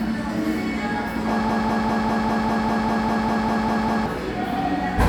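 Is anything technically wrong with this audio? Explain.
Yes. A broken-record loop runs from 1.49 s to 4.06 s. A fragment of about 0.2 s (199 ms) plays back to back, identically, 13 times, so the sound stutters in a rigid, mechanical rhythm of roughly five repeats per second instead of moving forward. The likely cause is a player, encoder or stream that stalled and kept re-sending the last chunk it held. Whatever should have played during those 2.6 seconds is missing.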